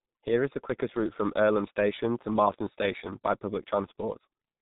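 Speech run through a G.723.1 codec for the whole clip: heavily muffled and hoarse, nothing above 4 kHz, smeared consonants, which fits a very low bitrate around 6 kbit/s.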